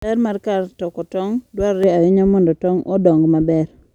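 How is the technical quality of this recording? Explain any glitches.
The recording has one fault, running from just before the midpoint to the end. De-emphasis applied wrongly, from 1.84 s to the end: a treble cut meant to undo pre-emphasis was applied where none existed or applied twice, sloping the response smoothly down to about 11 dB lower at 10 kHz than at 1 kHz. The speech turns dull and muffled, losing crispness in its consonants.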